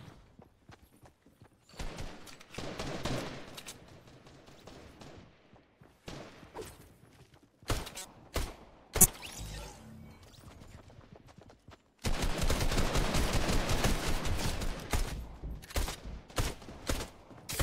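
A corrupt frame was decoded three times: damaged bits in the compressed stream were played instead of concealed, so misread gains and codes put energy at the wrong frequencies. At 7.98 to 8.05 s a faint blip, about -30 dBFS, spans what sounds like a couple of frames. At 9.01 to 9.05 s a louder squeak reaches about -10 dBFS. At 12.07 s a short chirp from a single bad frame peaks around -20 dBFS.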